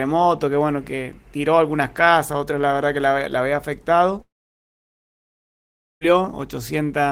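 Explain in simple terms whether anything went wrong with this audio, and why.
Something went wrong from about 4.21 to 6.04 seconds. The likely cause is a long network dropout: for nearly two seconds no audio reached the player. To cover the gap, the player stretched out the last bit of sound it had, which turns into a short buzz that fades away and leaves near silence for most of that stretch. When the audio returns just after 6 seconds, it simply carries on. The missing 1.8 seconds are gone for good.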